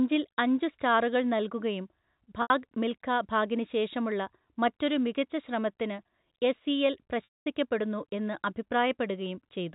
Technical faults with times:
2.42-2.50 packet loss with pitch repetition
7.24-7.45 packet loss with pitch repetition

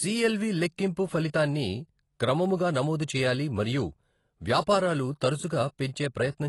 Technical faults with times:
0.00-6.49 AAC compression

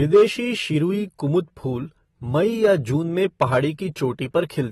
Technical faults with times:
0.00-4.71 AAC compression
0.14-0.23 hard clipping
2.64-2.73 hard clipping
3.42-3.57 hard clipping

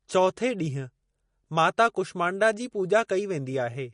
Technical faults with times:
0.00-3.93 MP3 compression

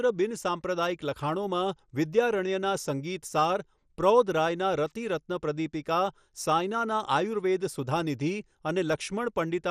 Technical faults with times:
0.00-9.70 MP2 compression

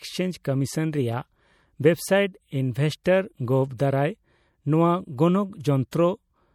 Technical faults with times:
0.00-6.55 MP3 compression
0.44 pre-echo
3.04 pre-echo
5.91 pre-echo

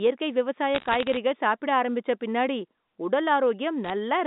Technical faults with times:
0.75-1.17 bit errors on a digital phone line
3.84-3.90 bit errors on a digital phone line

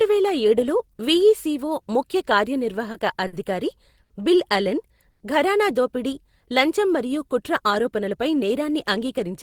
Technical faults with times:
2.91-2.96 short stall from a late packet
3.27-3.35 short stall from a late packet
4.03-4.12 short stall from a late packet
5.10-5.22 call audio freeze
7.62-9.42 jitter buffer speed-up

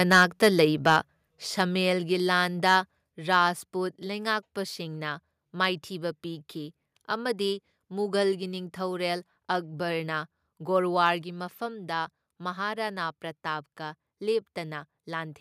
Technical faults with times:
0.11-0.60 microphone overload
0.87-0.97 microphone overload
1.02 microphone volume stepped down
2.66-2.76 microphone overload
3.06 microphone volume stepped down
3.33-3.35 microphone overload
11.07 microphone overload
11.22 microphone volume stepped down

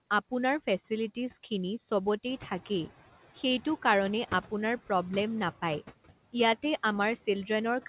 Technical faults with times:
0.00-7.89 noise suppressor artifacts

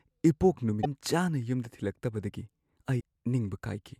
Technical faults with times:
0.80-0.86 damaged data in a compressed stream
2.97-3.01 damaged data in a compressed stream

